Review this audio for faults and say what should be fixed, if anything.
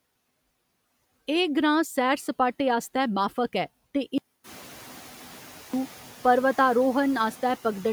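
Audio dropout to silence from 4.18 to 5.74 s: about 1.56 s of speech is replaced by silence, likely from a lost input link. Secure cabling and monitor input levels during recording.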